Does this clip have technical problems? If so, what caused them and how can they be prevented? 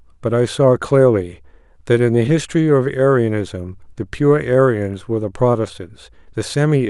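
No, no technical faults can be heard anywhere in this speech clip. With nothing going wrong in the audio, there is no cause to trace and nothing that needs preventing.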